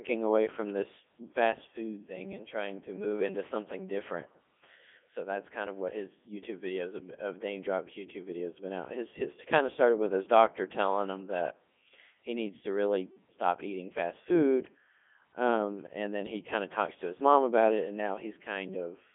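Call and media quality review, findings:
Codec 2 vocoder artefacts, entire clip. Speech robotic and buzzy, harmonics synthetic, natural waveform detail gone. Band roughly 200 Hz to 3.5 kHz, nothing above 3.7 kHz. Probable component: Codec 2 at the 3.2 kbit/s mode. Mechanism: only pitch, voicing, energy and envelope transmitted, then resynthesised from sine waves.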